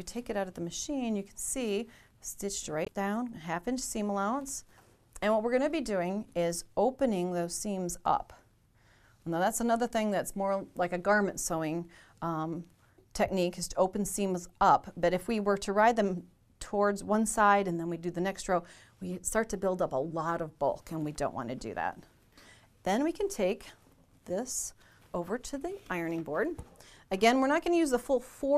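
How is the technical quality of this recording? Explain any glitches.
There's one glitch to flag: a spot of damaged data in the compressed stream, running from about 2.84 to 2.88 s, so roughly 46 ms. What's happening is that part of the encoded file got corrupted there, whether bytes were lost, zeroed or overwritten with something else. The decoder can't read those frames properly, loses sync and hunts for the next valid frame header before carrying on. That brief stumble comes through as a short disruption in the audio.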